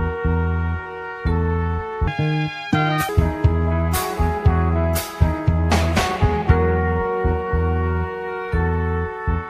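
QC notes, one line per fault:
2.07–3.09 s, section at the wrong speed: for about one second the sound runs 1.86 times too fast, so it turns hurried and jumps up by roughly ten semitones before snapping back to normal pace and pitch. The likely cause is that this stretch was played or resampled against the wrong clock. On a spectrogram, every harmonic and formant band leaps upward and spreads wider for that span. On the waveform, the cycles and envelope shapes look squeezed together in time.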